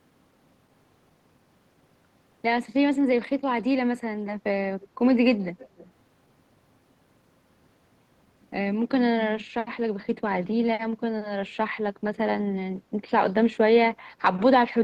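At 4.81 to 4.87 s, a faint delayed copy of the speech appears. It returns at 5.41 to 5.88 s for a longer stretch. Both copies trail the original by 300 ms and sit roughly 25 dB below it. This is echo leak. The likely cause is a far-end loudspeaker whose echo canceller let part of the microphone pickup through, so the sound came back delayed and quiet.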